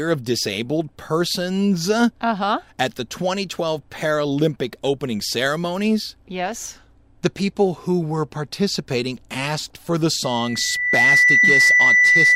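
Speech clip with loudspeaker feedback squeal from 10.24 s to the end, right after "participating asked for the". A 2 kHz tone swells within about a second to roughly 10 dB above the speech as microphone-to-speaker loop gain exceeds one.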